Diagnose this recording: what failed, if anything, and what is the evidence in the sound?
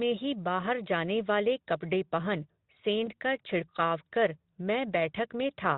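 Network: VoIP packet loss concealed by the speech codec. At 3.05 to 3.09 s, Speex stretches the last sound into a short fade. That fits one lost 20 ms frame.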